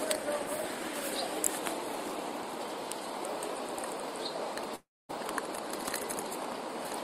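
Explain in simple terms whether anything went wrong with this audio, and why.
Between 4.75 and 5.11 s the sound cuts out: it trails off as a brief fading buzz or hiss, then goes nearly silent for about a quarter of a second before resuming. This is likely a long network dropout, where a third of a second of audio never arrived.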